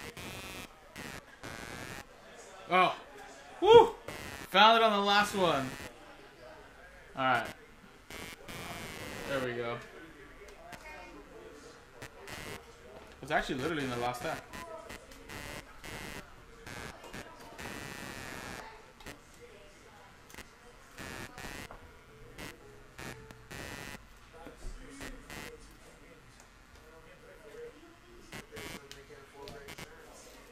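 Throughout, computer activity noise: processor and peripheral load shifts disturb the shared ground, adding a buzzy, chirping pulse near 150 per second, only around 15 dB below the sound.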